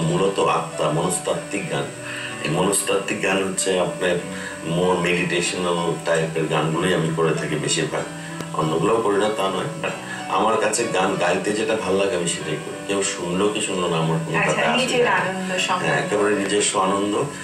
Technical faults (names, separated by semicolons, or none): loud pop